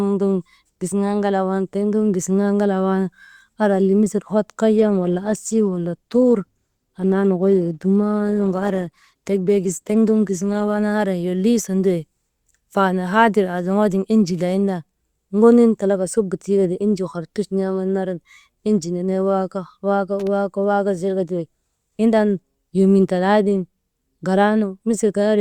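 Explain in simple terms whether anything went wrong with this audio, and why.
Adaptive stream at a lower bitrate, from 4.78 to 10.78 s, just after "misil hot": the connection slowed, so a lower-quality version played, adding more digital artefacts to the speech with a sudden change in quality and without any gap.

Loose connector crackle, from 20.19 to 20.27 s: a worn or dirty contact briefly made and broke the signal, causing a short, irregular burst of crackling.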